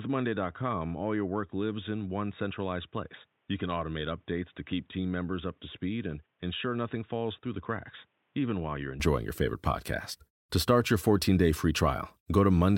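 From the start until 9.0 s, the speech is dull and boxy, with nothing above 3.8 kHz, about 10 dB quieter, and a faint new noise floor. It then clears instantly, with no gap, at "your favorite podcast". The likely cause is an input switched to a poorer device, since the band, level and noise all change together rather than just the tone.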